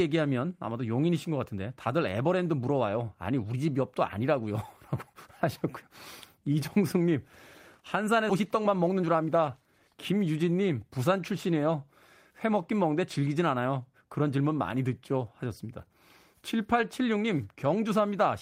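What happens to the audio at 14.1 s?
Nothing goes wrong at 14.1 s: the speech carries on there intact, with no dropout, click or other fault.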